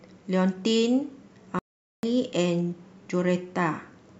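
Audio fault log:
1.59–2.03 s, playback stall: the player likely ran short of buffered data or had its output thread blocked, so nothing reached the output for 443 ms. The speech breaks off mid-flow into dead silence for nearly half a second, then resumes.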